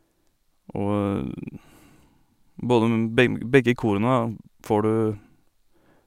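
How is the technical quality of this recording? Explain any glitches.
No technical faults can be heard anywhere in the recording, with the signal remaining continuous and intact throughout.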